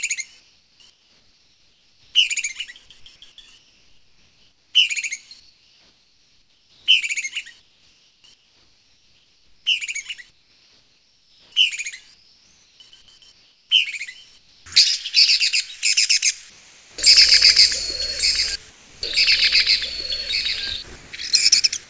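From 0.40 to 2.14 s, over much of 3.58 to 14.66 s, and again from 16.50 to 16.98 s, the real background gives way to a smooth, featureless hiss. That's comfort noise in place of the background, most likely from discontinuous transmission: the sender stopped sending during quiet stretches and the receiver made up noise roughly matching the room. In the last patch, the background sits about 31 dB under the loud parts and dips about 3 dB as the fill kicks in.

At 18.70 to 19.02 s, sound gets dropped by the voice detector. Roughly 160 ms of actual sound vanishes under about 320 ms of that same synthetic hiss, and then the audio picks back up. The likely cause is the sender's detector mistaking a quiet bit of real sound for background and muting it, so the receiver filled the gap as if nothing were there.

From 20.96 s to the end, the sound is chopped by the voice detector. It stutters, with about 220 ms in total swapped for fill as the detector likely flipped between sending and not sending more than once. 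All of this comes through a G.722 call path at 64 kbps that passes nothing above 8 kHz.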